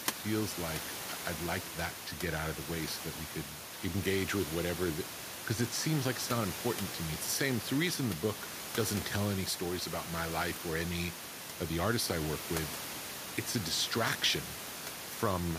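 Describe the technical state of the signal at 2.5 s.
At 2.5 s the speech signal is intact, with only the room's own background noise sitting about 11 dB below the voice as part of the recording.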